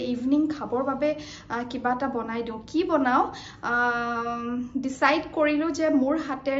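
Nothing stood out as a technical fault on listening to the audio.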